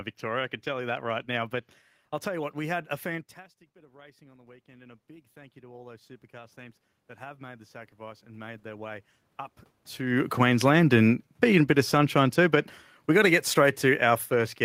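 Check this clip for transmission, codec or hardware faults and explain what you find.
Two gain-control faults are present, both from automatic gain control reacting to level changes at the microphone.

Automatic gain rising runs from 3.74 to 9.0 s, just after "we had a fantastic". The talker moved away around 3 s, dropping the input by about 24 dB. The control slowly added about 16 dB. Voice and room noise swell together.

Automatic gain falling starts at 9.99 s and lasts to the end. The talker moved around 10 s. The control found the input too loud, or its background noise too strong, and eased its gain down. Speech and background sink together.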